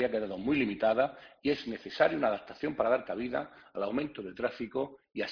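Nothing stood out on listening to the clip.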